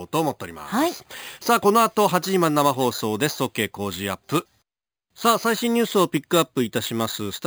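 Imaging from sample-and-hold upsampling throughout: repeated samples, unfiltered, took 11 kHz to 44.1 kHz, adding metallic fizz seen as mirrored harmonics at 5.51–11.03 kHz, about 15 dB down.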